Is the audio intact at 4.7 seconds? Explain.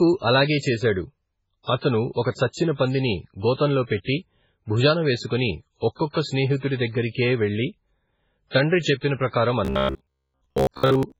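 No. At 4.7 seconds, as across the whole clip, the speech carries heavy damage that is likely from MP3 compression at a very low bitrate, around 16 kbps. Starved of bits, the encoder cuts the treble at a fixed frequency and drops weak frequency lines that flicker between frames, leaving the speech muffled, watery and swirly, with smeared onsets.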